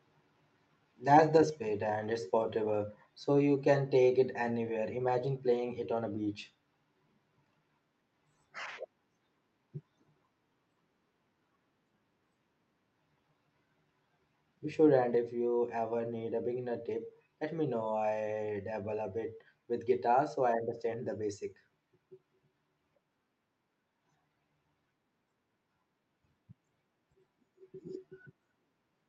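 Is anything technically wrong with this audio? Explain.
Yes. The speech drops abruptly in level twice, at 1.5 s by about 4 dB and at 15.15 s by about 3 dB, with voice and background falling together. This is likely a microphone volume stepped down by the call software, which lowered the input gain in one step after judging the level too hot. On a waveform the envelope shrinks at each point. A spectrogram shows every band dimming at once, within the high-frequency limit near 8 kHz left by the call codec.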